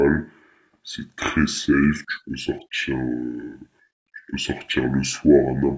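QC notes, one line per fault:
throughout: wrong sample rate. The speech sounds low and dragging, slowed to 0.667x speed and dropped 7.0 semitones, with pitch and tempo falling together by the same ratio. This fits 24 kHz audio played back at 16 kHz without conversion.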